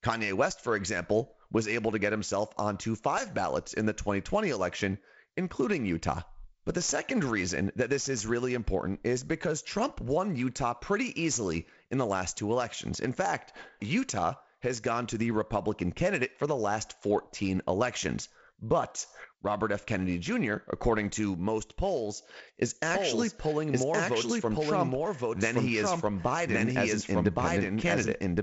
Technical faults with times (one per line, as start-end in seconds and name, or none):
22.95-28.43 doubled audio track